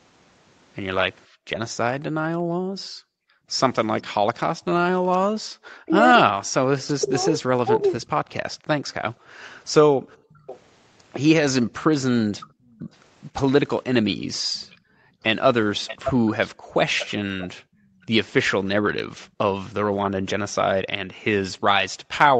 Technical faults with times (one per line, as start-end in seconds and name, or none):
1.26-5.28 background gated by the echo canceller
5.56-8.13 speech suppressed in double talk
7.05-7.84 echo leak
8.57-10.30 background gated by the echo canceller
10.09-12.74 echo leak
12.50-12.91 background gated by the echo canceller
14.42-22.40 background gated by the echo canceller
14.56-18.06 echo leak